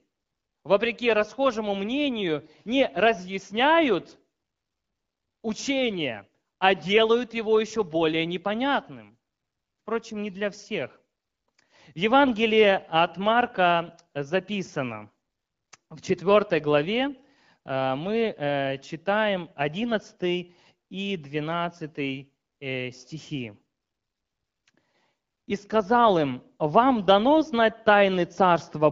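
No technical faults can be heard in the speech, which carries the light coding character of AMR wideband (HD Voice) at 12.65 kbit/s, with the band above 6.4 kHz filled in by the codec's shaped noise.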